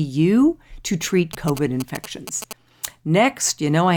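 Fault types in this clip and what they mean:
GSM signalling bursts: from about 1.33 to 2.53 s, a galloping dit-dit-dit of brief buzzes at about 217 Hz sits roughly 10 dB under the speech. A nearby 2G phone exchanging signalling bursts is being rectified by the audio circuitry. Mains hum is a steady, unbroken tone at 50 or 60 Hz and its harmonics. This interference comes in clumped, rhythmic groups that start and stop, and its buzz is pitched at 217 Hz.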